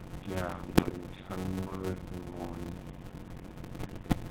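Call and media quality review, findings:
GSM full-rate codec, whole clip: buzzy, gravelly roughness on the speech, nothing above 4 kHz, codec damage plainly audible. Sounds like 13 kbps GSM full rate. Pulse-driven vocal-tract model keeps only a thinned excitation, so the fine detail's gone.

Block size mismatch (padded), throughout: steady buzz at 91.9 Hz, and everything runs slow at 0.533x with pitch roughly normal. Fits 256-sample blocks written into larger reads, with each block's tail zero-filled. Those gaps make the buzz and stretch the timeline.

GSM bit errors, 0.68–0.99 s and 3.79–4.18 s: squawks, pops, gargly breakup, a bit worse in the second burst. Looks like a weak radio link. Corrupted filter, pitch and gain values reach the decoder, so frames get spectrally bent or jump in level.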